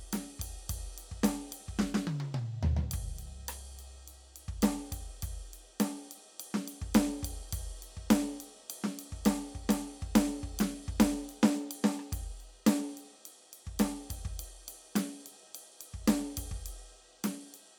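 Music, with no audible technical faults anywhere in the clip.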